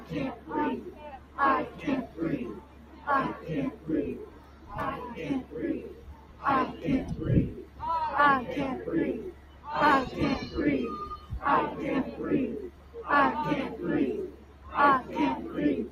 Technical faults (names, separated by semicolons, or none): noise suppressor applied to music or sounds; sound cut by the noise suppressor